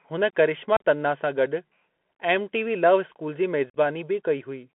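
The whole clip carries the sound of a Bluetooth CVSD headset codec. The speech is confined to a narrow phone band, roughly 200 Hz to 3.4 kHz. Everything above is gone. The coder tracks the waveform one bit at a time, which fits a 64 kbps link. Its adapting step lags behind loud, bright sounds. So sibilants turn scratchy, peaks distort, and a grainy hiss sits under the speech.

At about 0.77 to 0.83 s comes unconcealed Bluetooth headset packet loss. A handful of short voice packets never arrived. Nothing was patched in. About 37.5 ms of speech drops out, with hard edges. Near 3.70 to 3.76 s it happens again. About 52.5 ms is lost across 60 ms, with the longest hole about 45 ms. The speech stutters and briefly returns quieter.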